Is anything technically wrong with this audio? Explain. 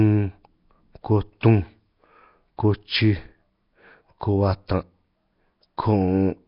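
Yes. Heavy Nellymoser compression damage runs through the whole speech clip, likely from the Nellymoser Asao codec. Nothing remains above 5.3 kHz, and weak bands that received no bits are filled with noise. The result is a gritty, hissing fringe and a blurred, submerged tone consistent with roughly 22 kbps.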